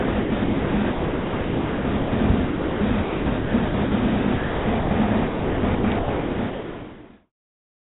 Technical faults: sound chopped by the voice detector

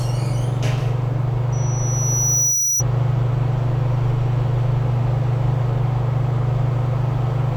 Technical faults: loudspeaker feedback squeal

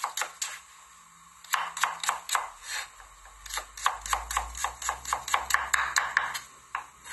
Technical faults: AAC compression

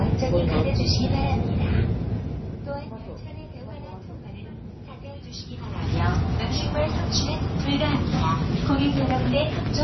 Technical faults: MP3 compression

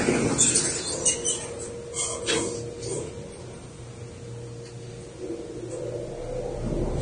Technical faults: Vorbis compression

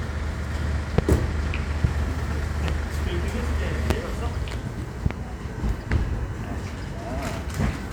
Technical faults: loud pop

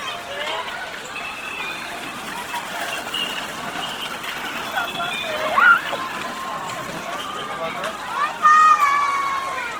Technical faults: Opus compression

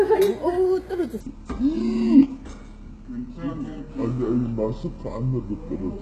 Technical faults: HE-AAC compression; section at the wrong speed

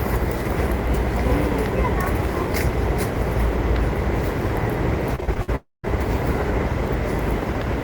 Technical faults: repeated packet loss (robotic sound); long network dropout

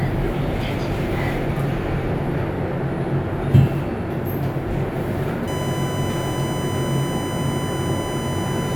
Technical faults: USB whine

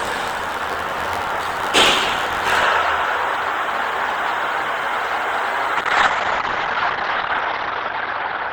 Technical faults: buffer tearing; call bitrate drop

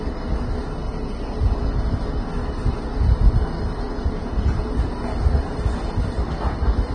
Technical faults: Vorbis compression

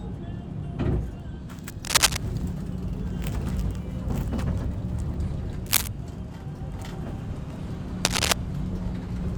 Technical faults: cable scratch noise; dropped buffer (overrun)

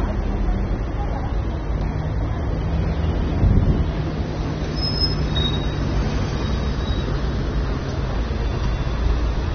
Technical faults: AAC compression

